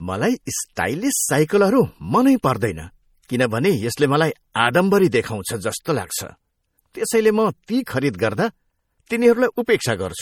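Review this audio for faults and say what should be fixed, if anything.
Throughout the speech there is plainly audible MP3 compression damage, likely from a low-bitrate encode, which fits roughly 48 kbps. Weak frequency lines drop in and out between frames, giving a watery, swirly texture and smeared consonant attacks, although content still reaches about 20.5 kHz. To prevent it, keep a lossless master and encode at a substantially higher bitrate.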